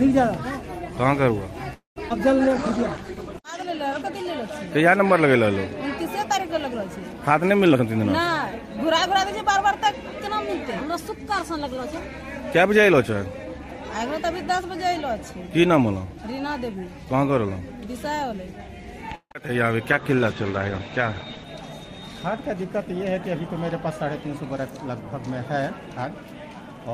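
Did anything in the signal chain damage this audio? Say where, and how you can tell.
Yes. The damage is in the network and call-processing stages. At 1.73 to 1.98 s the sound stretches into a fading tail, then about 130 ms of silence, and resumes where it stopped. This is a call audio freeze, likely from delayed packets draining the jitter buffer.

Short concealed packet loss hits at 2.10 s. About 40 ms of audio never arrived. The receiver patched the hole by carrying the last sound forward, heard as a brief smear. It also shed about that much delay.

There are two call bitrate drops, both from the call's bandwidth estimate falling. From 2.44 to 4.88 s the rate falls from 40 to 13 kbps and the sound turns rough. From 19.94 to 21.50 s it falls from 40 to 12 kbps. There the bandwidth shrinks from 20 kHz to 8 kHz, so the top end goes dull.

A jitter buffer slow-down runs from 2.49 to 4.25 s. 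Playback drops to 98% speed at unchanged pitch. The receiver repeated pitch periods to add 41 ms of reserve, and sounds come out slightly drawn out.

There are two jitter buffer speed-ups, at 7.69 to 13.11 s and 21.45 to 24.91 s. Both run at 104% speed with pitch held. The receiver cut short pitch-period pieces to trim excess delay, roughly a fifth and a seventh of a second.

Repeated packet loss (robotic sound) occurs from 19.15 to 19.50 s. Three gaps, the longest 155 ms, leave about half that stretch concealed. Each patch repeats the last sound before the next hole arrives, so it sounds choppy.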